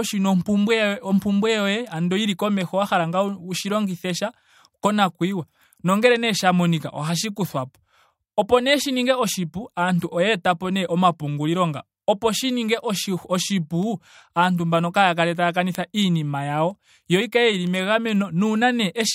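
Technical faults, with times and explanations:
0.41 to 18.63 s, word clock ticks: about twenty sharp ticks of uneven strength, roughly one per second, as an unlocked receiving clock drifts by around 20 ppm against the sender's, dropping or repeating one sample per slip. Their steady spacing distinguishes them from random clicks.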